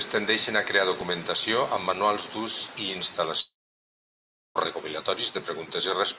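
Speech clip passing through a call path whose band stops at 4 kHz, consistent with G.711 mu-law at 64 kbps. The first fault is CD scratch ticks: a blemish on the disc destroyed more data on each rotation than error correction could rebuild, so the player patched those samples. Between 0.48 and 1.19 s, just before "amb manuals d'ús i", this produces five evenly spaced ticks, each only a few milliseconds long, of uneven strength. The second is a long network dropout, likely caused by audio failing to arrive from 3.4 to 4.57 s, right after "amb manuals d'ús i". The receiver extended the last sound as a brief fading buzz or hiss, then fell to about 1.03 s of silence. The speech resumes at 4.57 s with roughly 1.16 s of it missing.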